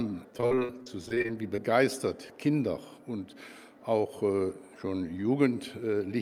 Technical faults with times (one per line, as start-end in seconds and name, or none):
0.37-1.60 repeated packet loss (robotic sound)